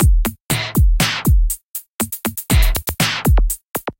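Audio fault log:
0.96–3.97 s, clock drift buffer slips: there's a click roughly every 1.0 s, about four in total, sitting right on top of the sounds. The steady spacing is the giveaway. This is likely two devices running on separate clocks that disagree by something like a few hundred ppm, so the buffer between them creeps until a short block of samples, maybe fifteen or so, gets dropped or repeated, leaving a tiny discontinuity you hear as a tick.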